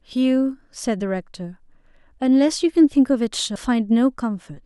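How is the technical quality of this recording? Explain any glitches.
The recording has one glitch, a CD skip. At 3.56 s the speech is broken by a short tick. The playback mutes for only a few milliseconds. It then carries on from a different point. A knock or a flaw in the disc made the laser lose its track and land on another turn of the spiral. So the audio resumes displaced by whole disc turns. The listener hears a click and an abrupt jump in the speech.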